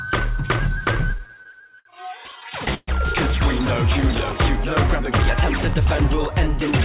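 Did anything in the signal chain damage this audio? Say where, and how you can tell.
Yes. The music drags and stutters from 0.92 to 1.87 s and 2.31 to 2.89 s. These are repeated stalls: late network packets emptied the jitter buffer, and the receiver stretched the last sound to fill each gap.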